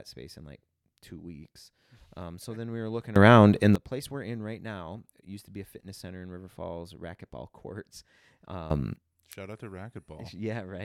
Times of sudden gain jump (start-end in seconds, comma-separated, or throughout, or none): 3.16-3.75, 8.70-8.96